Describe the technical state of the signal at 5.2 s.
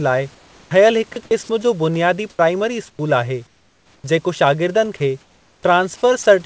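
At 5.2 s the room's background gives way to a flat, featureless hiss from 4.97 to 5.63 s: comfort noise in place of the background. The sender likely stopped transmitting during a detected pause, leaving the receiver to synthesise roughly matched noise.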